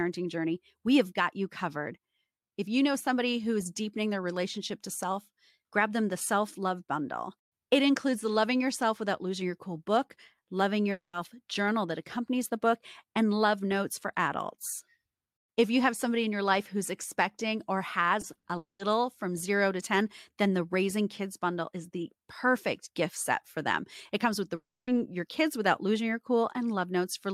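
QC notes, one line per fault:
10.91–11.15 s, long network dropout: The speech turns into a brief buzzy continuation of the last sound that fades, and about 80 ms of near-silence follows before the speech resumes further on. That resumed point is about 0.22 s later than where it stopped. The likely cause is a stall in the packet stream. The receiver stretched the final sound to cover the hole, but the missing audio itself was never played.
18.21 s, 18.33 s and 18.39–18.45 s, short concealed packet loss: The speech has three quick smears or wobbles, each with a tonal or hissy tint. The first two are 20 ms long and the third is 40 ms. Each time, a few hundredths of a second failed to reach the decoder in time. The receiver filled the gap by extending the preceding sound's pitch or noise, then blended back into the real signal.
18.57–18.81 s, long network dropout: Right after those smears, the sound becomes a fading synthetic continuation and then about 140 ms of quiet. 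Speech returns with about 0.22 s gone. This points to the likely case of the stream stalling outright, so the concealment ran out and left silence until packets arrived again.
24.55–24.89 s, long network dropout: This is the longest gap. A short buzzy tail fades into roughly a quarter-second of silence, and the speech comes back about 0.32 s further on, skipping what was lost. The likely cause is a stretch where no packets were delivered. The receiver could only extend the last sound briefly before falling silent.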